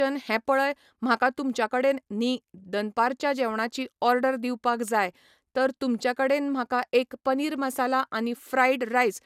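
Speech with a swirly, hollow texture and smeared consonant attacks from start to finish, and nothing above 16.7 kHz, likely from generation loss: repeated lossy re-encoding, perhaps a few passes of MP2 at around 128 kbit/s. A single encode at that rate would not sound this smeared.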